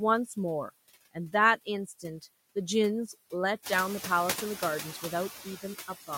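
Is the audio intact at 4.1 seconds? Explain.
No. Noise suppressor artifacts run through the whole clip: steady-noise bands are pulled down by about 14 dB frame by frame. At 4.1 s, just after the room noise rises at around three and a half seconds, the noise sinks between the words and rises under them.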